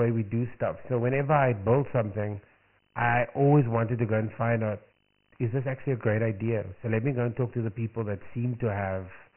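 From start to finish the speech carries Dialogic VOX ADPCM coding. Each sample is squeezed into a 4-bit step from the previous one, and the result fits a 6,000-samples-a-second, 24 kbps stream. Nothing survives above 3.1 kHz, so consonants turn dull, and the coarse steps leave a heavy gritty hiss riding on every syllable. A spectrogram shows a hard ceiling at 3.1 kHz with speckled noise filling the gaps between harmonics.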